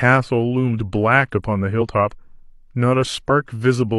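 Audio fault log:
1.77–1.81 s and 3.25–3.30 s: compressed frames skipped. The speech jumps forward twice, each time losing about 50 ms of sound. That gap fits one missing 46.4 ms coded frame, either absent from the file or rejected by the decoder as damaged. Playback resumes at the next good frame.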